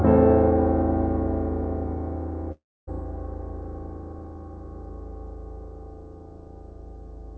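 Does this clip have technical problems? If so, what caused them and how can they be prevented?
Yes. A long network dropout, likely a stall in packet delivery, lost about 0.36 s of the music from 2.52 to 2.89 s. The receiver stretched the last sound into a fading buzz, then near-silence before playback resumed past the gap. A steadier connection with redundant packets would prevent it.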